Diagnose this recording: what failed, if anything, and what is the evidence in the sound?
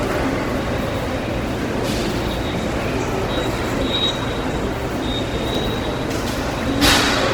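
The failure sits at the codec stage, and Opus compression is the likely cause. Throughout the clip the sound is plainly damaged: tonal parts turn rough and grainy, as if noise were filling spaces the original detail should occupy. That points to a music-mode encoder keeping each band's energy but filling starved bands with noise or folded copies of lower bands, at a rate that fits roughly 16 kbps. Unlike MP3, there is little swirling or hollow warble. Content reaches about 20.1 kHz, so there is no bandwidth narrowing and no muffled speech-mode sound.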